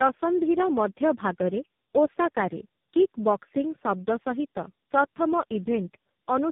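The speech is degraded throughout by tandem speech coding. It has passed through about three low-rate speech codecs in a row, consistent with AMR-NB at 6.7 kbit/s, then G.726 at 24 kbit/s, then AMR-NB again. Each coder re-encodes the previous coder's errors, so the result is rough, muffled and warbly, worse than any single link would produce. The audio also has nothing above 3.8 kHz, which matches the narrowband chain.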